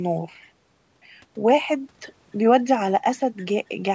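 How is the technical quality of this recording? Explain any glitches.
No glitches to explain: the speech has no technical faults, and the call microphone processing shows only as normal band-limiting, with nothing above 8 kHz and the lowest bass taken out by its high-pass filter.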